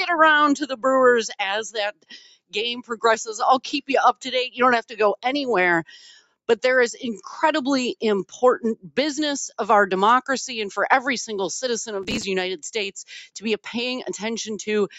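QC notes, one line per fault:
Throughout, noise suppressor applied to music or sounds: a speech-tuned suppressor was left on, treating sustained tones and tails as noise, so levels swing by around 10 dB and pump.
0.64–0.86, 1.92–2.56, 2.75–3.04, 4.13–4.33, 5.86–6.49, 8.75–8.92 s, sound cut by the noise suppressor: the suppressor misjudged these passages as noise and pulled them down by up to about 18 dB, so held sound sinks and decays end early.
12.03–12.23 s, processor overload crackle: the processor missed dozens of buffer deadlines in a row and skipped each one, leaving tiny hard-edged gaps, which fits buffers of around 3 ms. The result is a short burst of gritty crackle.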